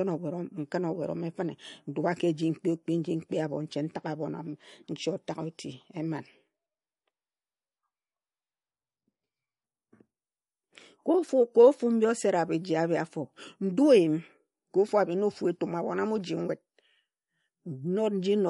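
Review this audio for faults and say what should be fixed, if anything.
Throughout the recording, the speech has no content above 11.2 kHz, and its quieter detail swirls with a watery texture that is plainly audible. The likely cause is MP3 compression at a low bitrate, probably around 48 kbps. Short of bits, the encoder cuts the treble at a fixed point and discards weak frequency lines, which flicker in and out from frame to frame. To prevent this, keep the original uncompressed or losslessly encoded, or use a much higher bitrate.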